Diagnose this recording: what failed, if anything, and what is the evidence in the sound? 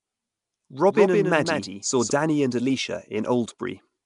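Throughout the speech there is a rough, hissy halo clinging to every syllable and a smeared, underwater quality, with nothing above 10.6 kHz. This is a codec-stage problem, likely Nellymoser compression, the Flash-era Nellymoser Asao coder, at a rate that sounds like around 44 kbps. It codes short fixed blocks with a tight, fixed bit budget. Weaker bands are starved of bits and refilled with noise, which gives the hiss and blur.

From 0.90 s to 2.10 s the speech is heard twice. A second, full-band copy trails roughly 150 ms behind and is about 5 dB quieter. It carries no reverberant tail or room colour, and it switches on and off abruptly at those two points, so it is not an acoustic echo. This is a doubled audio track, likely from a storage or editing stage where a second, delayed copy of the same signal was mixed in for that stretch.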